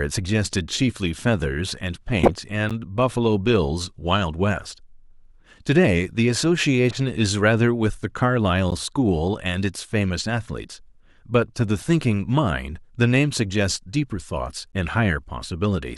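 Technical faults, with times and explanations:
2.19–2.31 s, 6.91–6.98 s and 11.78–11.82 s, corrupt frame decoded: brief squeaky chirps and noisy blips cut across the speech. Damaged bits in a few compressed frames were decoded anyway, so misread gains and codes put energy at the wrong frequencies for each burst.
2.70 s, 8.71 s and 14.72 s, gap between chunks: short, hard-edged dropouts of 12 ms recur every 6 s. The audio arrives in 6-second chunks, and silence is inserted at each join, breaking the speech without losing any of it.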